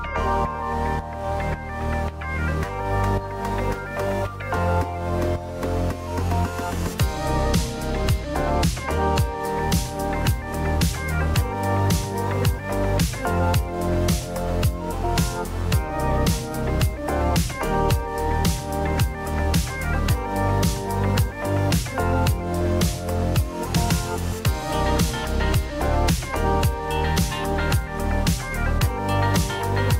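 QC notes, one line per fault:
7.12 to 9.41 s, channel delay (comb filtering): one side lags the other by a tiny fraction of a millisecond, which fits a delay of about one sample, so the mono sum cancels only near the top, around 20 kHz. This gives a slight dulling of the highest air rather than the hollow, swept notches of phasing or the broad treble loss of a low-pass filter.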